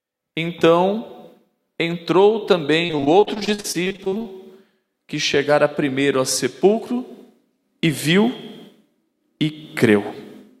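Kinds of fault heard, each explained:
Repeated packet loss (robotic sound): From about 2.85 to 4.27 s the stream keeps losing packets, around twenty short holes, the longest about 44 ms. Each is papered over by stretching the previous sound, roughly a third of that stretch, so it turns choppy, with pieces missing.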